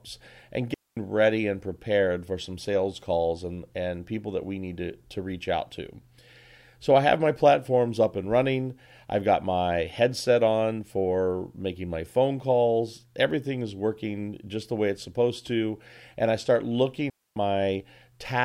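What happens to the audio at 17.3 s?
At 17.3 s the sound sits inside a digital wireless dropout running from 17.10 to 17.36 s, just after "I start": the receiver loses too much data and mutes for about 265 ms. The waveform shows a flat, near-silent gap and the spectrogram a clean blank column, with no noise burst at either edge.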